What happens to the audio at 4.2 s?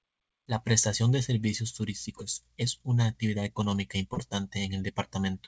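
Just before 4.2 s, from 4.14 to 4.18 s, there is a short concealed packet loss. About 20 ms of audio never arrived in time. The receiver covered the gap by extending the preceding sound, then blended back. It is heard as a brief smear.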